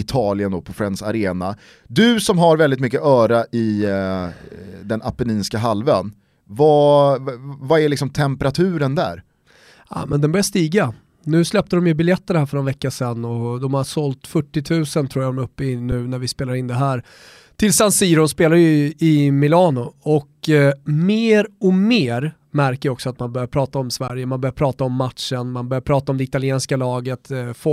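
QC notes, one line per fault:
10.12 s, 15.92 s and 24.08 s, underrun with held sample: the speech briefly freezes into a flat, toneless stall, about 6 ms at the first two and about 17 ms at the last, then carries on with only a soft step and no sharp click. The output buffer ran dry and the converter held its last value until data returned. Playback then resumed where it stopped, with nothing skipped. The 6 ms gaps fit a 256-sample buffer.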